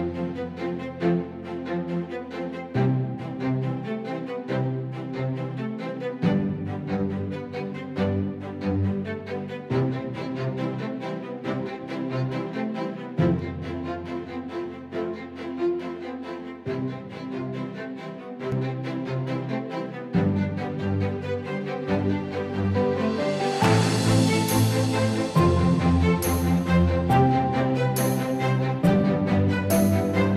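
From 13.39 to 18.52 s, one channel runs about 20 ms behind the other and the two are summed to mono, producing channel delay (comb filtering). Shared content cancels at evenly spaced frequencies starting near 30 Hz, leaving a rough, slightly doubled sound throughout.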